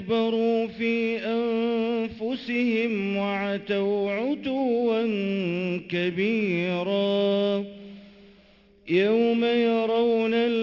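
A gritty, metallic edge rides on the sound from start to finish, with the brightness stopping abruptly near 6 kHz. This is aliasing: the audio was brought down to what sounds like a 12 kHz rate without filtering, so content above 6 kHz folds back as false tones roughly 30 dB below the signal.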